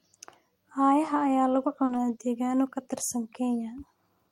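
At 1.85 s the speech briefly smears and wobbles for about 40 ms, through 1.91 s. This is a short concealed packet loss: that stretch never reached the decoder in time, so the receiver extended the preceding sound to cover the hole before blending back into the real signal.

Overlapping it, from 1.89 s to 1.95 s, about 40 ms turns rougher and noisier without any gap. This is a lost packet rebuilt from error correction, consistent with two lost packets. The decoder played the low-bitrate copies carried inside the following packets.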